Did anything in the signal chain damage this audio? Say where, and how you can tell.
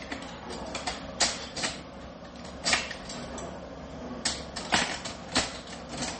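Yes, at the codec stage, likely MP3 compression: throughout, nothing sounds above 8.4 kHz, and the swirling, watery artefacts, which a plain low-pass filter wouldn't produce, fit a starved bitrate near 32 kbps.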